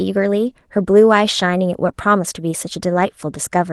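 Speech carried over a call link whose Opus coding rolls off the top end near 12 kHz. At 1.87 to 1.89 s, a 20 ms stretch plays rougher and noisier with no gap. This is a lost packet rebuilt from error correction: the next packet's low-bitrate copy was decoded in its place, so the sound keeps its real shape, only coarsened. Just after, at 1.91 to 1.95 s, a short concealed packet loss follows. About 20 ms never arrived, and roughly 14 ms of it was filled by extending the preceding sound before blending back. That leaves a brief smear or wobble rather than grainy but genuine content.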